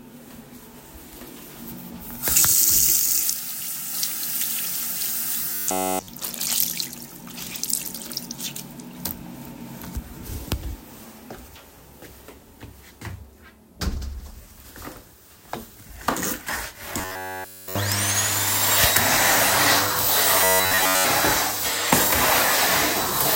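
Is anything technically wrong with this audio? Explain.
Yes. Three times, from 5.54 to 6.08 s, 16.99 to 17.75 s and 20.42 to 21.05 s, there is robotic sound from repeated short buffers. The likely cause is audio arriving too late, so the playback side loops a short stretch of about 10.7 ms and skips the real audio. That loop imposes a fixed 93.8 Hz buzz, a hard metallic drone. It replaces the sound entirely in the first two spans and most of the third.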